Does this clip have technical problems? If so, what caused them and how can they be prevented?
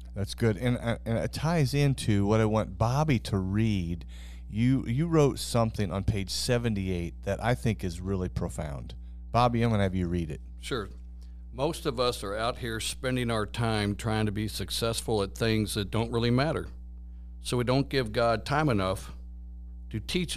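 Yes: mains hum, a steady 60 Hz tone with low harmonics, sits roughly 15 dB below the speech throughout, from ground-loop or transformer coupling. Prevent it with single-point grounding, balanced cables and distance from power supplies.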